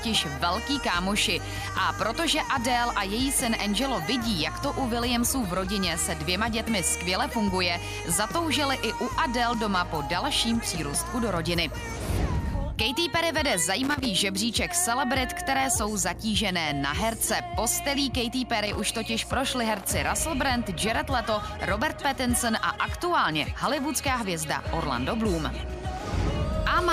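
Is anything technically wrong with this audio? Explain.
Yes. Loose connector crackle breaks in twice, from 13.83 to 14.06 s and again from 18.66 to 18.98 s, each burst lasting roughly a quarter to a third of a second. A worn or dirty contact in the signal chain is making and losing contact as it shifts, so the audio is chopped on and off in rapid, uneven succession. The result is an irregular scratchy crackle laid over the sound.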